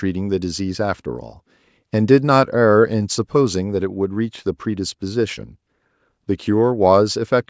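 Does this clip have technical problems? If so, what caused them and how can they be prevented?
No, there are no technical problems to report in this speech clip. It has passed through a call's microphone processing, so the lowest bass is trimmed and nothing sits above 8 kHz, which is how that path normally sounds.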